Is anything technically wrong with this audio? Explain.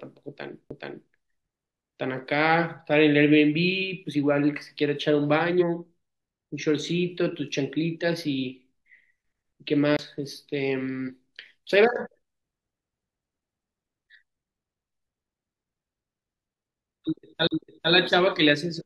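Yes, there are two separate kinds of dropout in this speech clip.

The CD skip shows up at 0.69 s, 9.97 to 9.99 s and 17.47 to 17.51 s. The laser gets knocked off its track onto a neighbouring turn of the spiral, so the player mutes for a moment and then carries on from a different spot. You hear a small tick in a short gap, from roughly 15 ms up to about 40 ms, and then the speech lands somewhere other than where it left off.

The compressed frames skipped glitches are at 5.59 to 5.63 s, 11.07 to 11.11 s, 13.67 s and 18.77 to 18.81 s. Here the decoder just never plays some frames, either because they're missing or it threw them out as corrupt, so the audio jumps ahead. The jumps come in steps that fit a 42.7 ms frame: roughly 150 ms at most spots and about 40 ms at 11.07 s. Each join is heard as a brief glitch where the speech jumps ahead.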